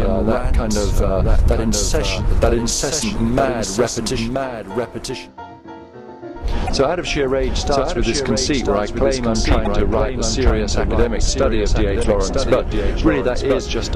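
From the start and for the whole clip, a doubled audio track is audible. A second full-band copy of the sound trails the original by about a second, only a few decibels quieter and with no decay or room colour. It most likely comes from the audio being captured twice, once through a slower path. On a spectrogram every pattern reappears about a second later, slightly fainter. In the waveform, shapes repeat at that offset.

At 2.99 to 3.04 s, 6.65 to 6.70 s, 9.63 to 9.67 s and 12.01 to 12.05 s come four short bursts of damaged data in a compressed stream. Each lasts about 40 ms and sounds like a brief glitch. The decoder misreads corrupted frames, loses sync and then finds the next frame header. A spectrogram shows each burst as a narrow smeared vertical blotch, and the waveform shows a brief jagged or discontinuous stretch.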